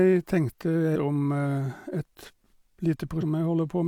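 A brief disturbance breaks into the speech from 0.92 to 0.96 s, and a second one follows from 3.18 to 3.24 s. Both come from damaged data in a compressed stream. Part of the encoded data at those points was corrupted, so the decoder could not read those frames correctly. It lost sync and had to search ahead for a valid frame header before clean audio resumed.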